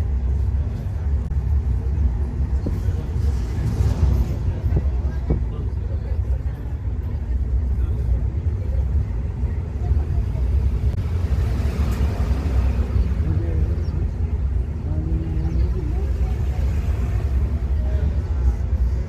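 The audio carries two short bursts of damaged data in a compressed stream, at 1.24 to 1.31 s and again at 10.91 to 10.97 s, each lasting roughly 65 to 70 ms. Each is heard as a brief chirp, squawk, click or short hole cutting across the sound. Bytes in the encoded stream were corrupted at those points, so the decoder misread the affected frames, lost sync, and emitted garbage until it locked onto the next valid frame header.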